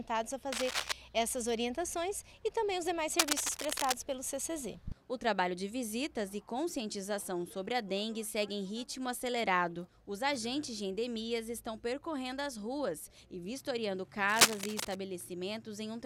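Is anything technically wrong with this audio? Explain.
Yes. Dense, uneven scratching bursts, cable scratch noise, break in from 0.52 to 0.92 s, 3.19 to 3.96 s and 14.28 to 14.95 s. They run about as loud as the sound itself, somewhat louder in the last burst. The likely cause is a worn cable or connector shifting and rapidly changing its contact resistance.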